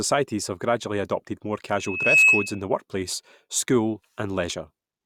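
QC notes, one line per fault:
1.77–2.62 s: loudspeaker feedback squeal. A pure tone near 2.6 kHz swells over roughly 0.4 s to sit about 10 dB above the speech, because the mic-to-speaker loop gain exceeds one there. A single steadily growing pitch sets it apart from a constant whistle or hum.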